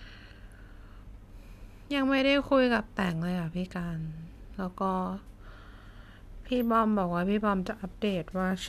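Nothing technical goes wrong anywhere in this bit of speech, so there's nothing to point out here.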